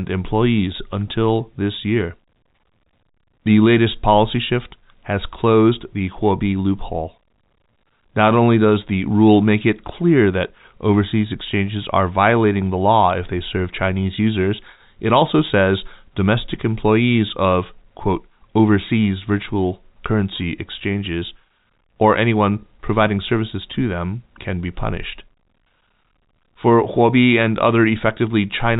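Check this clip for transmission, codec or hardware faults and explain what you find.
Nothing stood out on listening to this speech, which comes through the G.711 telephone coding path with its narrow, telephone-band sound.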